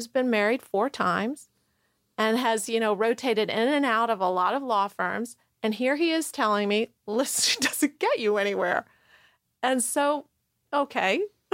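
No dropouts, clicks, distortion or other transport or processing faults can be heard anywhere in the clip.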